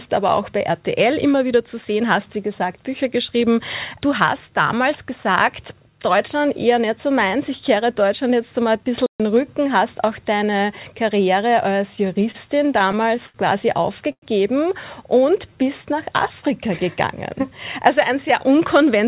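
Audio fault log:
9.06–9.20 s, playback stall: the sound cuts to silence for about 136 ms mid-flow, then carries on from where it broke off. The likely cause is the player running short of data or its output thread being briefly blocked, leaving nothing to play.
11.96–13.36 s, repeated stalls (stutter): ten separate holds across this span, the longest 75 ms and 173 ms in total. Packets kept arriving late, so the jitter buffer emptied repeatedly and the receiver extended the last sound each time. Nothing is lost, but the audio drags and stutters.
14.12–14.24 s, short stall from a late packet: one packet missed its slot and the buffer ran dry, so the receiver stretched the preceding sound for 99 ms until it arrived. Playback then resumed at the same point, leaving one sound held too long with a slight buzz or dip.
15.15–15.83 s, jitter buffer slow-down: with its reserve running low, the receiver repeated single pitch periods and slivers of pauses, adding 47 ms. 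The audio plays at 94% speed with unchanged pitch, so sounds are drawn out.
17.83–19.05 s, jitter buffer speed-up: the buffer held more than its target, so the receiver cut out short pitch-period pieces totalling about 50 ms. The audio runs at 104% speed with pitch unchanged, all within the call path's 4 kHz band limit.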